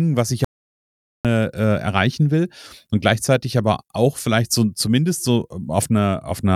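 Speech, with an audio dropout to silence just after "was ich": from 0.45 to 1.25 s the sound stops dead, leaving about 0.8 s of silence with no room tone, a flat line on the waveform and a blank spectrogram column. The likely cause is input lost mid-recording while writing continued.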